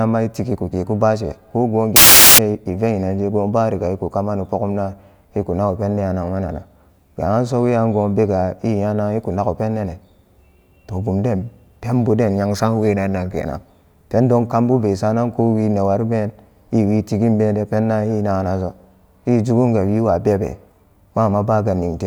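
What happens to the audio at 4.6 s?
Nothing goes wrong at 4.6 s; the speech carries on intact through that moment.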